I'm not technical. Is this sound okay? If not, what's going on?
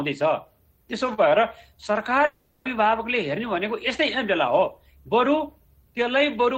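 No. A long network dropout runs from 2.25 to 2.67 seconds. For about 0.4 seconds the sound turns into a fading buzz, likely because audio stopped arriving and the player stretched out the last sound it had. Afterwards the sound resumes, missing that stretch.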